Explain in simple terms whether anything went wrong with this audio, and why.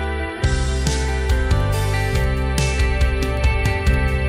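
Nothing went wrong that I could hear: listening through the clip, nothing stood out as a problem.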